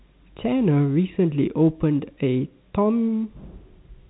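Nothing in this speech recording stands out as faulty: it carries the narrow band of G.711 telephone coding, with nothing above about 3.9 kHz.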